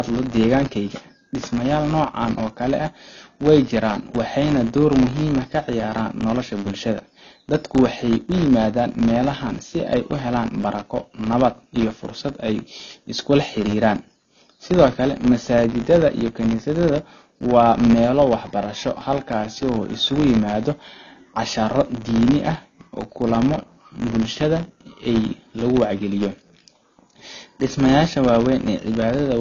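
A filter restarted on every block, losing its state each time, so throughout the speech a small transient opens every block, forming a 100 Hz buzz that rises and falls with level.

The speech has nothing above 7 kHz and carries codec artefacts throughout, which points to low-bitrate audio saved at a high bitrate, likely a low-rate AAC encoding re-saved as high-rate MP3.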